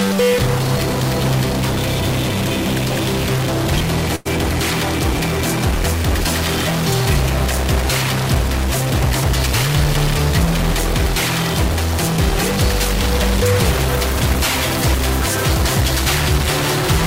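Throughout, grainy noise or buzzy distortion rides on the signal and pauses fill with noise, likely from a stuck bit holding one data bit fixed at 0 or 1. At 4.15 to 4.27 s, a short stall from a late packet stretches the preceding sound by about 0.1 s, with nothing lost, and everything after runs 99 ms later.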